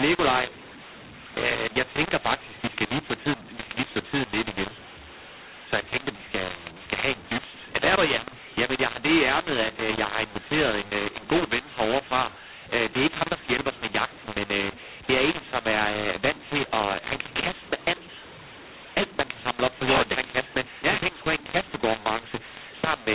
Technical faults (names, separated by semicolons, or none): mu-law and A-law mixed up